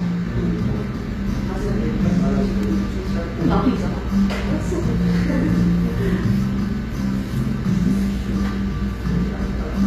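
HE-AAC compression is the likely cause of what runs through the whole clip: a plainly audible gritty, metallic sheen on the treble, with nothing above 14.9 kHz. That treble has been rebuilt from copied lower bands, which fits a low bitrate around 24 kbps.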